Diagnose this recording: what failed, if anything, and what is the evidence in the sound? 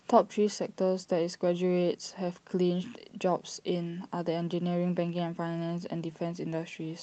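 Nothing failed: the speech comes through the call path with the top end stopping around 8 kHz, which fits an Opus wideband setting at a modest bitrate, and the sound points to no fault at any stage.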